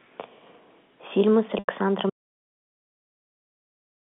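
Telephone-band speech, limited to roughly 200 Hz to 3.5 kHz as G.711 line audio is, briefly turns buzzy and held at 1.59 s, sustaining one pitch before fading until 1.67 s. That is packet loss with pitch repetition: about 90 ms of audio went missing, which fits three lost packets, and the receiver filled the gap by repeating the last pitch period and fading it out. From 2.10 s to the end the sound cuts to silence with no room tone, an audio dropout to silence, likely caused by the input being lost while the recorder kept writing silence.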